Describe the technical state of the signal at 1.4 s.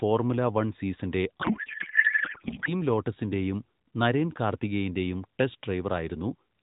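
A codec payload misread runs from 1.42 to 2.72 s, after "വൺ സീസണിന്റെ": the AMR frames are unpacked with fields misplaced, which fits octet-aligned data read as bandwidth-efficient, so garbled warbling noise replaces the speech until "ലോട്ടസിന്റെയും നരേൻ കാർത്തികേയന്റെയും".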